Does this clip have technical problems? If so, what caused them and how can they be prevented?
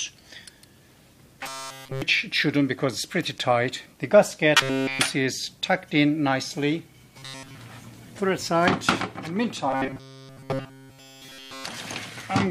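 Yes. Robotic sound from repeated short buffers occurs at 1.43 to 2.02 s, 4.57 to 4.99 s, 7.19 to 7.57 s (mostly, not entirely, repeated) and 9.71 to 11.65 s. Each stretch is a rigid metallic buzz at 134 Hz. The likely cause is a chunk of about 7.5 ms being looped while fresh audio arrives too late. On a spectrogram this shows as flat, evenly spaced harmonic lines. On a waveform it shows as identical cycles repeating.

A larger jitter buffer or steadier audio delivery would prevent it.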